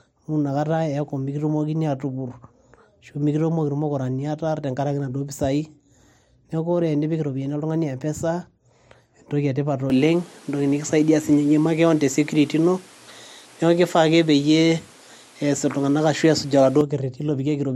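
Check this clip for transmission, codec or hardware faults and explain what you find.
One fault is present. From 9.9 s to 16.8 s, just after "entoki etipat", the input likely switched to a poorer device. Its narrower band cuts everything above 13 kHz, so speech turns duller, level shifts about 5 dB, and new noise sits roughly 30 dB below, without any gap.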